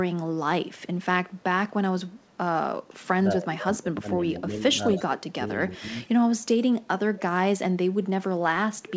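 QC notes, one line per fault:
3.39–4.06 s, 4.42–5.40 s and 5.71–6.39 s, speech suppressed in double talk: with both ends talking at once, the echo canceller likely could not tell the near talker from its own loudspeaker echo and turned everything down. The speech sinks in pieces, by around 15 dB in the first and third stretches and as much as 25 dB in the middle one. Roughly a third to half a second of each stretch is dulled or broken up.
4.12–4.40 s, 4.89–5.05 s and 6.04–6.09 s, echo leak: a loudspeaker on the far end fed the talk back into its microphone, and its canceller likely left some of it in the return path. A delayed copy arrives about 0.24 s behind the original, in short scraps. The first two sit at roughly 15 dB under the speech, and the last is a faint trace near 35 dB down.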